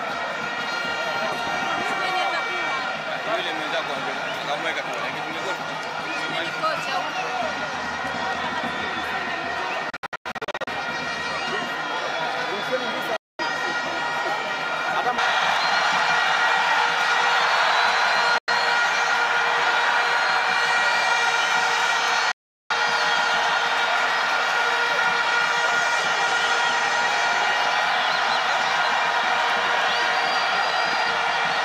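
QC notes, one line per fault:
9.90–10.68 s, digital broadcast dropout: the worst one, a cluster of short holes spread over about 0.77 s, adding up to roughly 0.45 s of missing sound, with the longest gap around 96 ms. The receiver seems to be losing frames and muting with a quick 3 ms fade each time.
13.16–13.40 s, digital broadcast dropout: a clean mute of about 0.22 s.
18.38–18.48 s, digital broadcast dropout: brief 0.1 s hole.
22.32–22.71 s, digital broadcast dropout: about 0.39 s gone. The gap lengths fit lost frames of about 32 ms.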